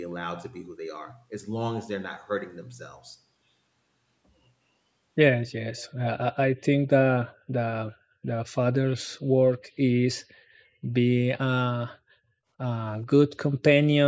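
From 5.76 to 5.92 s there's a brief echo leak: a very faint copy of the speech returning about 436 ms late, likely from a loudspeaker echo canceller letting it through.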